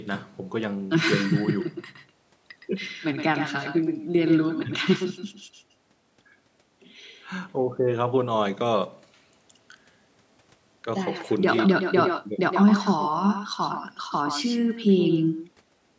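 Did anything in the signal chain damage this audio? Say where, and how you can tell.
Yes. An echo with no canceller runs through the whole speech clip, introduced at the call-processing stage. Every phrase is trailed roughly a tenth of a second later by a thinner copy about 8 dB below the direct speech. The far end plays the call over a loudspeaker, its microphone picks that sound up, and no echo canceller strips it out, so the return path sends it back after the network round trip.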